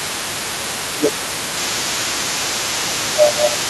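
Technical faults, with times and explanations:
Throughout, other side's voice leaking through: a second voice is audible under the talker for the whole clip, sitting roughly 10 dB below. This is likely residual echo: the far end played on a loudspeaker, and the echo canceller didn't fully remove it from the microphone.
0.87 s to the end, speech suppressed in double talk: the talker's level drops, at its deepest by around 10 dB, while both sides are active. The likely cause is the echo canceller, unable to separate near talker from echo, attenuating both together.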